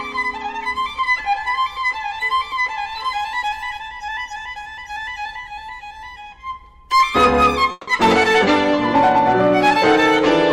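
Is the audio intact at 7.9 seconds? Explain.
No, not quite: 7.9 s is the tail of a long network dropout running from 7.71 to 7.89 s, likely caused by lost network data. A fading buzz fills about 160 ms, then about 10 ms of silence, and the audio resumes with 160 ms skipped. That lost stretch and trailing silence separate it from a brief packet-loss glitch.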